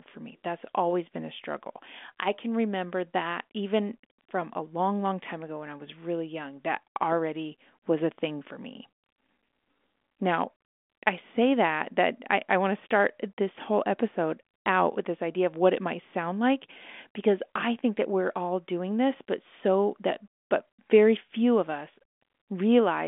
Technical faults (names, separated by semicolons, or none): none